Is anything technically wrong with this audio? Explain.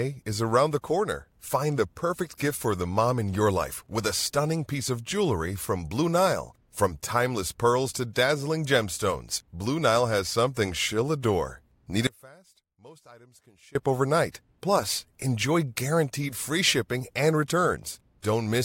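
Yes. From 12.07 s to 13.75 s the speech abruptly drops to a faint residue, roughly 25 dB below its normal level, for about 1.7 s, then snaps back. This audio dropout was likely caused by losing the wanted signal while the downstream path stayed live.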